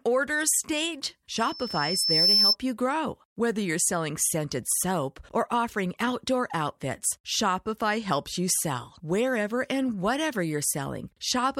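From 1.34 to 2.56 s, a loudspeaker feedback squeal rises at 5.3 kHz, swelling over roughly a second to about 10 dB above the speech. The microphone is re-amplifying the loudspeaker it feeds. A spectrogram shows a bright horizontal line, and the waveform's envelope grows steadily.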